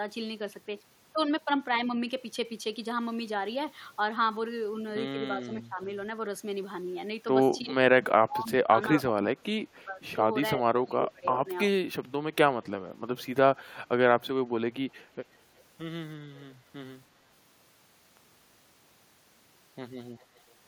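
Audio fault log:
5.37–5.8 s, 7.62–10.21 s, 10.77–11.47 s: speech suppressed in double talk. The talker's level dips by up to about 20 to 25 dB, sometimes in short pieces and sometimes over longer stretches. The longest run, at 7.62–10.21 s, has about one and a half seconds of affected audio. This is likely the echo canceller reacting to simultaneous far-end activity. Unable to separate the local talker from loudspeaker echo, it attenuates both, and the talker sounds ducked or broken.
7.6–7.64 s, 11.32–11.67 s, 12.63–13.24 s, 15.01–15.06 s, 16.35–16.39 s: echo leak. A delayed copy of the speech returns about 340 to 356 ms late, with the delay creeping up slightly across the clip. Most fragments are faint, roughly 30 to 40 dB below the speech. The one at 11.32–11.67 s is louder, around 15 dB down. The likely cause is residual loudspeaker pickup that the far end's echo canceller failed to remove, so brief scraps of the talker's own voice come back.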